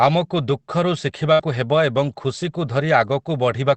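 A speech recording carried over a WebRTC call path using Opus, band-limited at about 8 kHz, with two faults in close succession. A burst of packet loss runs from 1.33 to 1.41 s. The receiver extends the last decoded sound for about 57 ms, attenuating it as the gap continues, so the audio smears into a held, fading tail instead of cutting to silence. Roughly 60 ms of the original audio is skipped, and when playback resumes the speech jumps forward past the missing portion. Immediately afterwards, from 1.41 to 1.43 s, one lost packet is rebuilt from error correction. A low-bitrate redundant copy carried in the following packet fills that 20 ms frame, so there is no gap, but the frame sounds coarser and noisier than the surrounding audio.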